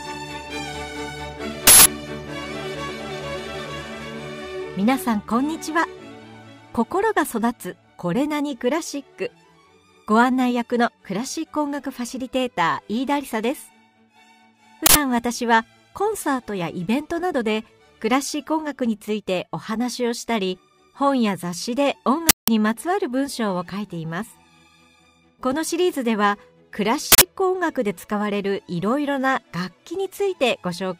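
Uninitialised buffer bursts occur at 1.67, 14.86, 22.29 and 27.12 s. Each is a short, loud blast of digital noise, lasting about 0.19 s at 1.67 and 22.29 s and about 0.09 s at the others. Blocks were played before any audio filled them, so stale memory came out as sound. The lengths fit 8192- and 4096-sample blocks.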